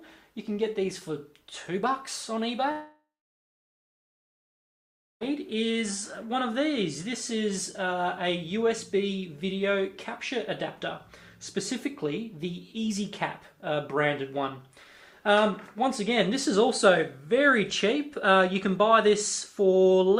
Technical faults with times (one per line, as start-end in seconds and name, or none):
2.71-5.23 long network dropout